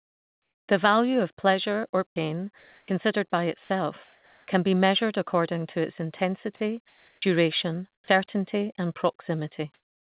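It's a speech clip carried over a call path that tops out at 4 kHz, which fits a narrowband G.711-style codec. The main problem is comfort noise in place of the background, four times: 0.00–0.68 s, 4.04–4.48 s (ending just before "can be measured according"), 7.94–8.08 s and 9.74–10.02 s. In each gap the real room tone drops out and a flat, featureless hiss takes over. That's likely discontinuous transmission, where the sender goes quiet during pauses and the receiver synthesises noise. The level changes are about 9 dB down at the start, about 2 dB down at 4.04 s, about 11 dB down at 7.94 s, and about 29 dB up at the end, where the true background is very faint.

There's also sound chopped by the voice detector, twice: 2.08–2.88 s right after "of a pleasure or", and 6.56–7.22 s right after "measured according to its". In each stretch roughly 0.38 s of quiet speech edges gets swapped for synthetic fill, so the speech sounds choppy. 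The likely cause is the detector toggling sending on and off mid-phrase.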